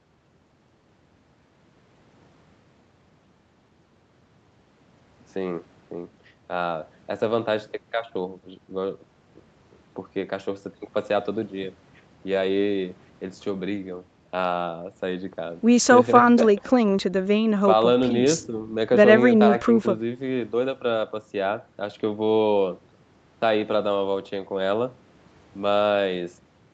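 Nothing stood out on listening to this speech recording, which carries the narrowed top end of a call path, with nothing above about 8 kHz.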